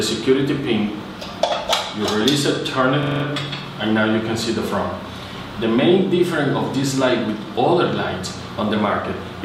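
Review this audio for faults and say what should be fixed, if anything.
A system hang loop occurs from 3.03 to 3.24 s. One 42.67 ms slice of sound repeats exactly five times. At that loop rate of 23.4 Hz it comes across as a hard, rapid stutter rather than a steady buzz. The computer or its driver stalled while the sound hardware kept replaying the same ring buffer. The loop length fits a 2048-sample buffer. Little or no audio is missing around it. To prevent this, fix the driver or system stall so the buffer keeps getting refilled, and give the audio thread priority.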